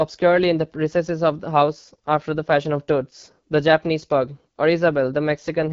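From start to finish the speech runs through the AMR wideband (HD Voice) codec, and it's working hard. The roughness and raspy edge on the voice fit one of AMR-WB's low modes, around 8.85 kbit/s, where the pulse-driven vocal tract model has too few bits to follow the speech. Up top there's only codec-made noise standing in for real detail, and nothing at all above 7.5 kHz, so the sound stays clearly coded throughout.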